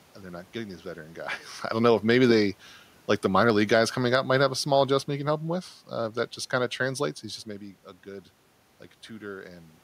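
Just after "maybe they like the", from 3.43 s to 7.17 s, the automatic gain control judged the input too loud, or its background noise too strong, and eased its gain down by about 4 dB, which is automatic gain falling. The speech sinks gradually, and the room noise sinks with it, unlike the talker's own movements near 1.5 s and 7.5 s.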